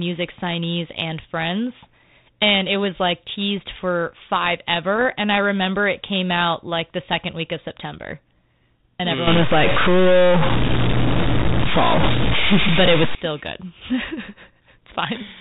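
Bit errors on an ADPCM link, from 4.96 to 5.05 s: a sparse scattering of flipped bits in this speech, whose band-limited telephone sound points to a 32 kbit/s G.726 link. Each wrong bit knocks the decoder's step size and predictor off track, so a short pop rings on as a rough burst with brief level jumps.

A stuck bit runs from 9.27 to 13.15 s, likely a data line or converter bit held at one value. Roughly half the samples land off by that bit's weight, giving a distortion that follows the waveform, and pauses fill with noise instead of going quiet.

More bit errors on an ADPCM link hit from 12.03 to 12.06 s, inside the stuck-bit stretch and at a heavier error rate, so the pop and rough burst there are denser before the predictor settles again.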